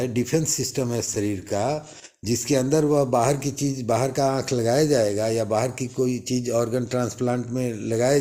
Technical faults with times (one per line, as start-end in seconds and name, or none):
0.79-1.88 repeated stalls (stutter)
2.78-3.39 jitter buffer slow-down